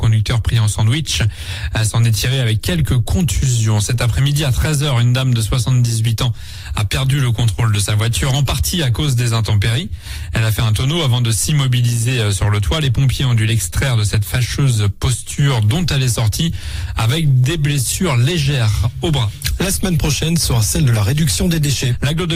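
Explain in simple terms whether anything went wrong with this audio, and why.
Nothing went wrong with this recording; careful listening finds no audible problem anywhere in it.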